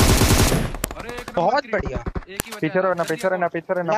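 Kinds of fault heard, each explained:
File header played as audio: a leftover WAV header plays as samples, giving sharp snaps at 0.84 s and 2.40 s, regardless of the signal. A dropout or edit click would instead follow the waveform.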